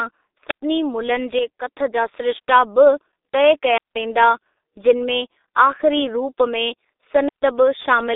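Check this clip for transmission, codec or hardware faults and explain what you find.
The speech throughout carries one fault, heavy G.723.1 codec damage. Low-rate coding consistent with about 6.3 kbit/s, slow model updates and a 300 Hz to 3.7 kHz line band leave it muffled, hoarse, consonants smeared, nothing above 3.8 kHz.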